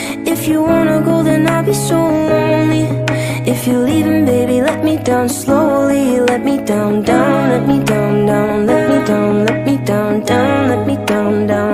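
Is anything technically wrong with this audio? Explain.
No, nothing technically wrong stands out here; it all sounds the way it should.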